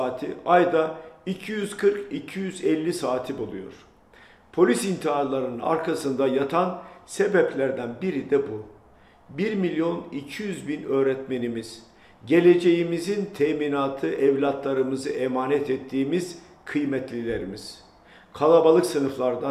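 Clock slip clicks run from 0.11 s to 19.5 s, a fast, even train of tiny ticks roughly every 30 ms that blurs into a soft rattle, hundreds in all, most noticeable on loud, bright or sustained passages and gone in silence. The likely cause is two devices on free-running clocks that disagree by something near 700 ppm, so a single sample is dropped or repeated each time the drift adds up to one whole sample.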